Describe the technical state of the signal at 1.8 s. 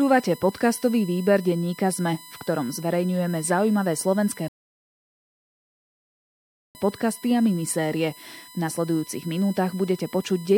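At 1.8 s the speech is carrying USB whine, which runs through the whole clip. The bus's 1 ms frame timing leaks into the power or ground, giving a fixed-pitch tone at 1 kHz, loudest at its 4 kHz harmonic, sitting roughly 25 dB under the speech.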